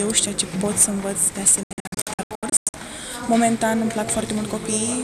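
A digital broadcast dropout runs from 1.63 to 2.74 s. Across that stretch of about 1.1 s the sound keeps dropping into short silent holes, the longest about 96 ms, adding up to roughly 0.65 s of missing audio. Each cut fades out in about 3 ms. The receiver muted whenever frames arrived corrupted or failed their checksum, and resumed as good ones returned. The pattern points to a couple of dozen lost frames, and that material is gone for good.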